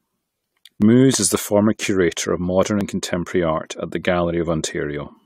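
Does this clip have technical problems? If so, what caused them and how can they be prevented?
Yes: overlap between stream segments, at 0.82 s before "is the former curator" and 2.81 s between "former curator of modern" and "contemporary art at the". Overlapping timestamps make the player trim real audio, so the waveform jumps in a tiny skip rather than a silent dropout. Spacing fits 2-second segments. To prevent it, set segment timestamps contiguously when packaging.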